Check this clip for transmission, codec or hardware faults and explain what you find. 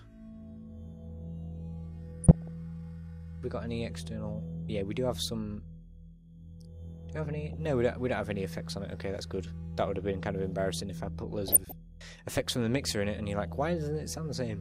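There is one transmission fault here, DAB burbling, in three short bursts: 2.24 to 2.48 s, 7.43 to 7.54 s, and 11.48 to 11.72 s. Weak reception likely let bit errors slip past error correction into the MP2 data. The error rate fits a fraction of a percent. Corrupted samples put short blips of noise in single sub-bands, and corrupted scale factors make sub-bands leap in level for up to a frame. Each burst covers roughly five to thirteen frames. It sounds like short blips of noise over the sound.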